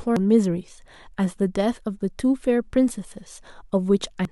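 At 0.16 s, and again from 4.25 to 4.31 s, damaged data in the compressed stream makes the decoder lose sync. Each spot comes out as a brief chirp or blip.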